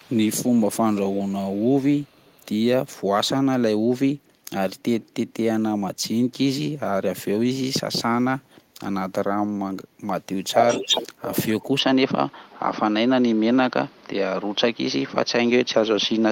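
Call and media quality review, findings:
Echo leak: faint delayed copy of the speech trailing the original by 408 ms, at 0.0–1.77 s, 1.95–2.46 s, 4.79–4.83 s and 5.29–5.34 s, mostly well below the direct speech. Returns at 10.51–11.69 s at roughly the same level as the speech itself. Likely the far end's echo canceller on a loudspeaker leg, letting part of the mic pickup of our audio back into the send path at varying strength.

Input switched to a poorer device: from 11.79 s to the end, the audio goes duller and narrower, and a new noise floor roughly 30 dB below the signal. No gap and no level jump at the switch. Likely a mid-call change of capture device, such as a fallback microphone or a headset call profile, with a narrower band and its own background noise.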